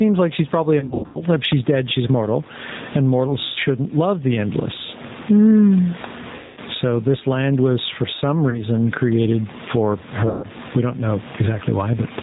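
From start to finish the level breathes, with a swing of roughly 20 dB, and the faint room noise sits about 33 dB below the speech. This gain pumping is likely a too-hot input gain being pulled down by a fast limiter, which squashes loud and quiet parts together.

Throughout, the speech is also slightly rough and synthetic, with nothing above 4 kHz. That is plainly audible G.729 codec damage. The codec rebuilds the voice from a filter, a pitch predictor and a few pulses per frame, at what fits 8 kbit/s.

At 0.79 to 1.24 s, the sound smears into a fading buzzy tone or coloured noise in several bursts. About 270 ms is missing across 360 ms, with the longest gap 90 ms. Similar stretches follow at 3.47 to 3.58 s (90 ms lost), 6.36 to 6.61 s (210 ms), 8.50 to 8.61 s (30 ms) and 10.28 to 10.46 s (150 ms). This is VoIP packet loss concealed by the speech codec. The decoder extends its last pitch and filter while fading the gain, and the voice stays weak briefly after packets resume.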